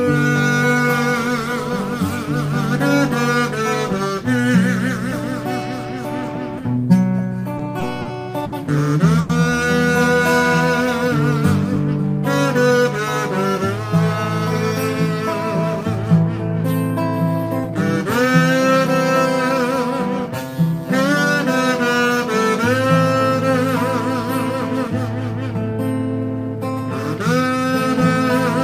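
From 7.57 to 9.31 s the sound drags through repeated stalls (stutter). The jitter buffer ran dry five times, and the receiver stretched the last sound to fill 240 ms in total, the longest wait 90 ms, losing nothing. On a spectrogram the stalls show as short smeared stretches of repeated frames, and the waveform has faded patches.

Between 12.71 and 13.96 s comes a jitter buffer speed-up. The buffer held too much audio, so the receiver cut out short pitch-period pieces, about a twentieth of a second overall. It runs at 103% speed with unchanged pitch. The waveform is slightly compressed in time, and the spectrogram's harmonics stay put.

From 21.94 to 23.52 s a jitter buffer slow-down sets in. The buffer ran low, so single pitch periods or bits of pauses were repeated, adding 96 ms and dropping playback to 94% speed. Sounds are drawn out, and the spectrogram shows stretched segments at constant harmonic spacing.

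A second jitter buffer speed-up runs from 25.71 to 28.28 s, again at 103%, trimming roughly a tenth of a second.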